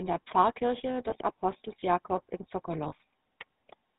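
The whole clip has passed through the GSM full-rate codec, which fits its 13 kbps rate. It rebuilds speech from a vocal-tract model excited by sparse regular pulses and discards everything above 4 kHz, so the speech sounds dull, buzzy and gravelly throughout, with plainly audible damage.

Lost GSM frames occur at 1.1 to 1.14 s, consistent with one dropped frame, and at 2.88 to 2.93 s, fitting two. The decoder repeats the last good frame's settings, so each gap becomes a brief rough, metallic smear.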